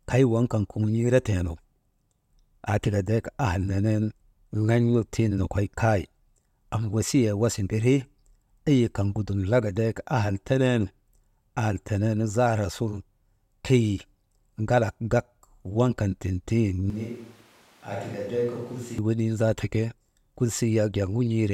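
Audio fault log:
16.90–18.98 s, switch to a distant microphone: for about two seconds the speech turns suddenly roomy and hollow, drops to roughly 10 dB quieter, loses low-end body, and gains a noise floor sitting only about 25 dB below the speech. This likely happens because the close microphone's feed dropped out and a farther pickup took over. That pickup hears more room reflection relative to direct sound, and the abrupt change in and out gives the handover away.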